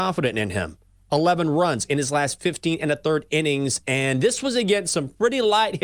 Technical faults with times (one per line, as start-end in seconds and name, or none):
0.00-5.84 sample clock jitter